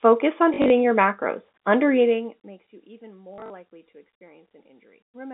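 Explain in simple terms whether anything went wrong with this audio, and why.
Packet loss with the last packet repeated, at 0.54–0.70 s and 3.34–3.50 s. Pieces of speech went missing, and replaying the previous piece caused brief robotic stutters.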